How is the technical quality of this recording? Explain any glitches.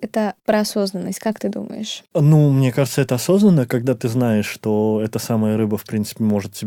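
No glitches turn up anywhere in this speech recording. There are no dropouts, clicks or other technical faults to explain.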